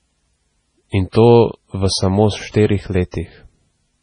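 From the first moment, the speech carries heavy damage that points to MP3 compression, likely at a very low bitrate around 24 kbps. Nothing is left above 9.9 kHz, so the top end is dull and closed in. Weak frequency lines drop in and out between frames. That gives a watery, swirly texture, with metallic chirps on s sounds and softened consonant attacks.

At 1.12 to 1.15 s, just before "to v samo", there is pre-echo. A short hiss runs for about 33 ms ahead of the attack. The codec spread noise meant for the loud onset across the whole block, so it leaks into the quiet gap first. The same fault returns at 2.51 to 2.54 s, right after "to v samo", lasting about 32 ms. Both onsets sound smeared.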